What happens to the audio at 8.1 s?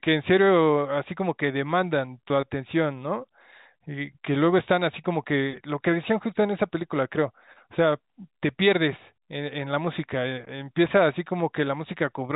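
Nothing goes wrong at 8.1 s; the speech carries on intact through that moment, with only the narrow telephone-band character of G.711 coding that runs through the whole recording.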